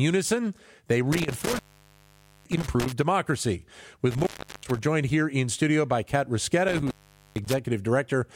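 Speech with an intermittent contact fault. A loose connection breaks the signal three times, at 1.12–2.92 s, 4.11–4.79 s just before "joined here in studio", and 6.69–7.59 s. The line stays open for 0.87 s, 0.36 s and 0.45 s. Each cutout crackles at its edges.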